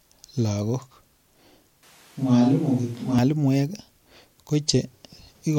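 From 1.83 to 3.19 s the speech turns roomy and hollow and loses bass, with noise around 30 dB below it and little level change, likely a switch to a distant microphone.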